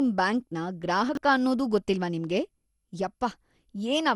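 From start to finish the speech sounds swirly, smeared and hollow, with consonant attacks blurred and nothing above 11.9 kHz. This is generation loss, likely from repeated lossy coding: the character fits an MP2 stream at 96 kbit/s decoded and re-encoded about seven times. Each pass quantises again on a shifted frame grid, so the noise and spectral holes pile up beyond what a single encode at that rate would leave.

Between 1.09 and 1.17 s there is a brief garbled, jumbled moment, which is chunks out of order. A 21.33 ms block of audio plays after material that should come after it, which fits a chunk arriving about three positions late. Nothing is missing, but the wrong sequence leaves hard joins where the waveform jumps.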